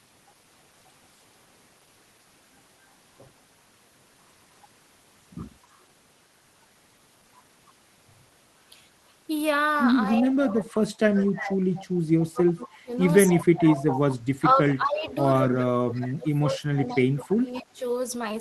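A faint delayed copy of the speech appears at 5.71 s, then louder at 11.75, 13.9, 14.65 and 16.88 s. Each copy trails by 231 ms, the likely sign of echo leak from an incompletely cancelled loudspeaker. Unlike suppression, it adds sound rather than removing it. From 10.1 to 11.6 s, and again from 12.34 to 17.82 s, the main voice itself dips by up to about 25 dB, likely speech suppressed in double talk.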